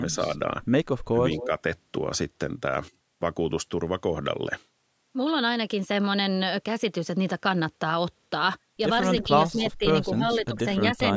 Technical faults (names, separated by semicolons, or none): speech suppressed in double talk; echo leak